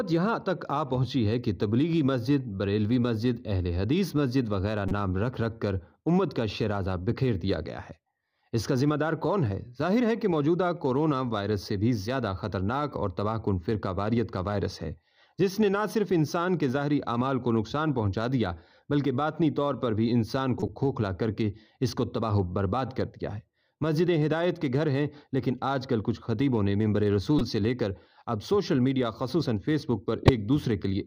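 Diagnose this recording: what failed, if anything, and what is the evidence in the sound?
The codec stage failed: you've got corrupt frames being decoded. There are four short bursts of wrong-sounding energy, at 4.88–4.92 s, 20.60–20.69 s, 27.38–27.41 s and 30.23–30.29 s. They're brief chirpy blips, the second and last ones spanning a few frames and the others about one. They peak around -15 dBFS, and the last one is louder, near -10 dBFS. Damaged bits got played anyway, so misread gains and codes spray energy at the wrong frequencies for each bad frame.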